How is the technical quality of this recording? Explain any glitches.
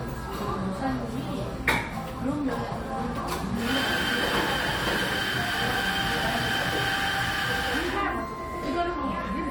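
The recording has no audible technical faults.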